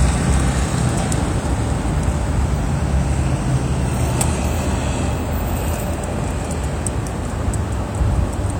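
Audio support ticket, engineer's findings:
No fault found on listening. Ticket closed with no action required on the audio path.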